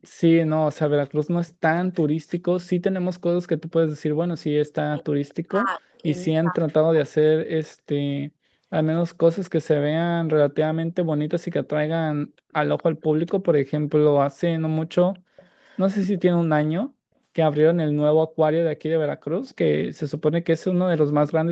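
At 0.01 to 0.09 s and again at 1.48 to 1.53 s, a brief delayed copy of a second voice comes back. This is echo leak. It sits about 30 to 35 dB below the main speech and trails by 247 ms. The likely cause is a loudspeaker on one side of the call. That side's echo canceller did not remove everything its microphone picked up, so a scrap of the played voice was sent back.

From 4.84 to 7.3 s, the speech dips and drops out in pieces. This is speech suppressed in double talk. The dips add up to roughly 1.5 s, and the deepest falls about 40 dB. Inside this stretch, at 5.29 to 5.34 s, another echo scrap appears, about 30 dB down. The likely cause is an echo canceller that could not tell its own talker from the loudspeaker echo while both were active. It turned both down.

The echo leak returns at 12.51 to 13.31 s and at 15.13 to 16.2 s. These are longer stretches, about 25 dB below the speech. 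A last short scrap comes at 19.49 to 19.55 s, about 35 dB down. Every return keeps the same 247 ms delay. Throughout the clip, the sound stops at 8 kHz, which fits the call codec's bandwidth.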